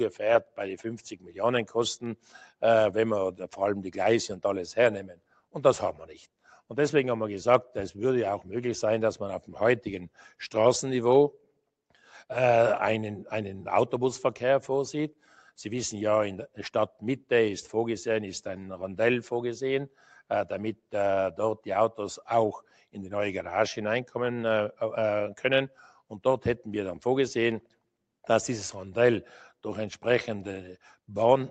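Sound cut by the noise suppressor dips the level by about 9 to 12 dB at 1.16–1.37, 5.11–5.54, 19.89–20.08, 22.62–22.95 and 25.69–26.11 s. Steady and fading parts sink while sudden onsets survive, which tells it apart from a dropout, where everything vanishes. The whole clip stops at 8 kHz, consistent with a call codec.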